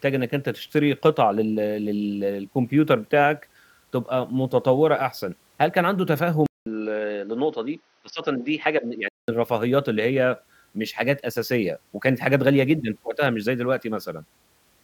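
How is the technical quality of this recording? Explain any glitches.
One glitch stands out. From 6.46 to 9.28 s, the input likely switched to a poorer device. A 200 ms silence marks the switch. Nothing above 6.1 kHz passes, so the speech turns dull. A faint new hiss appears. Loudness stays steady. Clarity returns at 9.28 s.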